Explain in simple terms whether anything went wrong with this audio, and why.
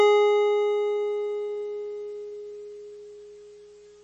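The music was likely squeezed too hard by MP3 compression, so from start to end nothing above 8.3 kHz survives, leaving it dull, watery and swirly.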